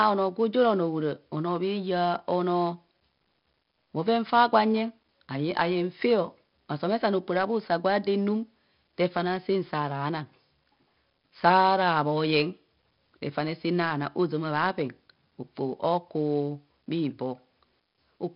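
From start to finish the speech carries 4-bit ADPCM compression, heavy enough to leave a gritty hiss riding every loud syllable and smeared, distorted attacks. Nothing sits above 5.3 kHz, pointing to a low sample rate, with a bitrate near 44 kbps. A spectrogram shows a hard ceiling and level-following noise.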